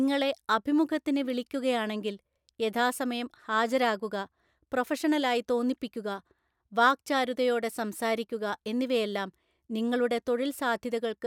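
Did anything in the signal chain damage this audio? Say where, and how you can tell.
No, nothing in the signal chain has audibly damaged this speech recording. Listening through, no point in the audio points to any stage between capture and playback having altered the signal.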